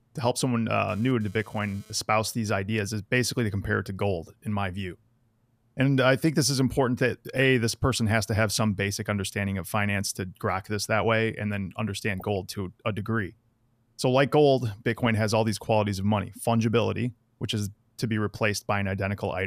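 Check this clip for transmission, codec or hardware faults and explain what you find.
Two kinds of fault turn up in this speech clip.

From 0.89 to 1.93 s, between "to help someone" and "these ideas is basically", there's GSM phone buzz. A nearby 2G phone is bursting data at 217 Hz, and the audio circuit rectifies those pulses into a raspy, harmonic-rich buzz about 30 dB down that flickers on and off.

DAB burbling shows up at 7.36–7.42 s, at 12.20–12.22 s (after "that way and then", before "gold to a degree") and at 15.06 s (just before "has all these qualities"). Weak reception lets bit errors slip into the MP2 data, so single sub-bands get short blips of noise or jump in level.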